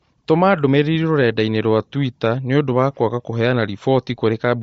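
From start to finish, the speech carries damage that likely comes from Bluetooth LC3 compression, the transform codec of LE Audio. Working in short blocks of about 10 ms at a rate that fits roughly 32 kbps, the encoder has too few bits for the whole spectrum, so it discards much of the upper band and substitutes synthetic noise. The result is plainly audible: a breathy, grainy sheen over the voice, with the upper detail sounding noisy rather than crisp.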